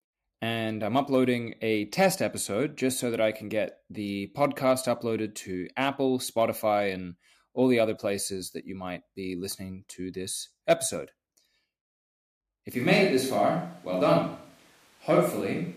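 At 12.74 s the speech abruptly turns roomy and hollow, with thinner bass but no level drop, to the end: likely a switch to a distant microphone. A spectrogram shows faded low frequencies, reverberant tails and a noise floor about 35 dB below the speech.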